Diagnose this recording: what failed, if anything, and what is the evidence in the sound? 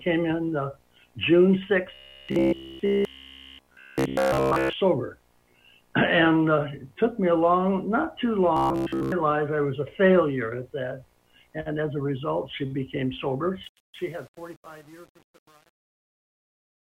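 Robotic sound from repeated short buffers at 1.94 to 4.73 s and 8.57 to 9.12 s, at the driver or buffer stage: the sound becomes a rigid metallic buzz at 66.8 Hz. Essentially every stretch is a repeat, likely from a roughly 15 ms block replayed while fresh audio arrived too late.

Truncation distortion on a fade from 13.64 s to the end, a sample-format conversion fault: the fade-out that begins around 13.6 s is rendered at 8 bits without dither, so from 13.89 s its quiet tail turns grainy.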